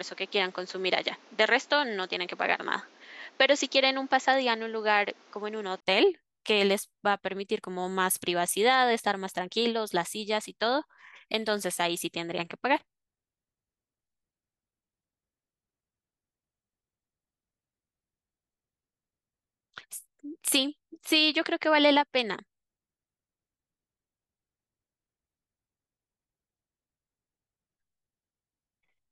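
For the first 5.82 s the speech sounds dull and boxy, with nothing above 7.6 kHz and a faint background noise some 30 dB down. At 5.82 s a brief 20 ms gap precedes fuller, clearer sound at a similar level, likely an input switched to a poorer device and then back.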